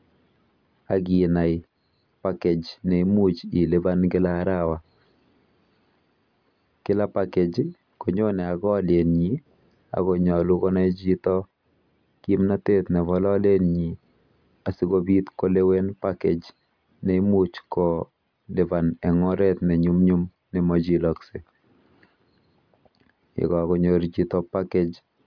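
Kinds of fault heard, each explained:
No technical fault can be heard anywhere in this speech recording. There is nothing in it to list under any kind.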